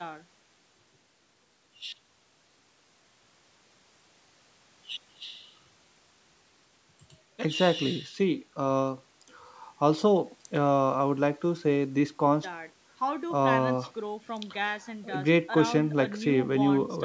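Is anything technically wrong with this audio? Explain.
No, nothing is technically wrong with this audio.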